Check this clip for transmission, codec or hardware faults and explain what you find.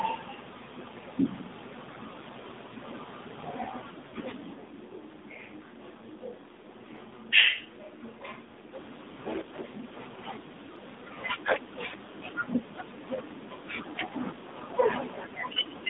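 Three faults are audible in this speech clip: a mobile codec throughout, a brief dropout near 4.1 s, and a span of distant, roomy sound from 4.5 to 8.7 s.

AMR narrowband mobile codec, throughout: the speech passes through the 2G/3G AMR-NB coder, which models the vocal tract and drives it with sparse pulses. The line is confined to 200 Hz to 3.7 kHz, and the plainly buzzy, synthetic texture fits a low rate near 7.4 kbps.

Lost AMR speech frames, 4.08 to 4.14 s: about 40 ms of speech failed to arrive, consistent with two lost 20 ms frames. The decoder filled the gap by repeating its last good pitch and vocal tract settings at falling gain, giving a short warbly dip before the sound recovers.

Switch to a distant microphone, 4.53 to 8.73 s: the sound abruptly turns hollow and roomy, thinner in the bass and roughly 5 dB quieter, with faint room noise well below the speech. It then snaps back. 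This likely reflects the close microphone dropping out, leaving a farther pickup in use.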